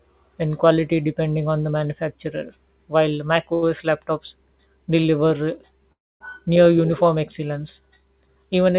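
Speech heard through a narrow call path with nothing above 4 kHz, consistent with G.711 mu-law, has three timing faults. At 3.54 s, right after "on the manufacturer while", a sound is held about 83 ms too long with a faint buzz or dip, and at 5.00 s the same happens for about 31 ms. These are short stalls from a late packet: the jitter buffer ran empty, the receiver stretched the last sound until the packet arrived, and nothing was lost. From 5.92 to 6.22 s, just before "near uniform excellence", a call audio freeze brings a brief buzz or hiss that dies into about 260 ms of silence before the speech resumes where it stopped. The likely cause is packets held up in transit draining the jitter buffer, which inserts a gap rather than dropping audio.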